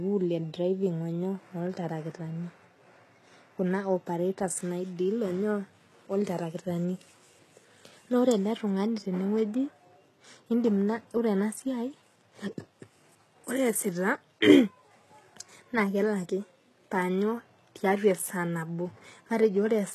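From start to finish the speech carries plainly audible HE-AAC compression damage, likely from a low bitrate around 16 kbps: rebuilt treble stopping near 12.4 kHz, with gritty, lispy s sounds.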